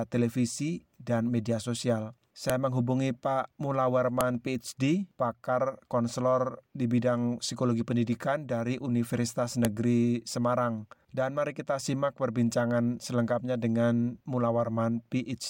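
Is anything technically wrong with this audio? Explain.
Yes. Separate pieces of the audio were joined without their WAV headers being stripped, so each file header played as audio. The few dozen bytes of header data were read as sample values and played back as a burst of arbitrary amplitude. This produces a sharp, loud click or snap at 2.50 s, 4.21 s and 9.65 s. Each one marks where a new piece begins and cuts across whatever the sound is doing at that moment.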